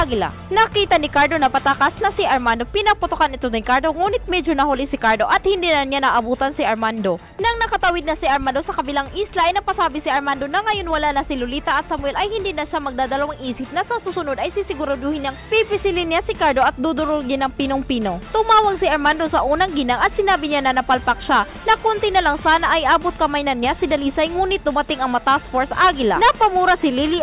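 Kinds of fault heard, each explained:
No faults are audible.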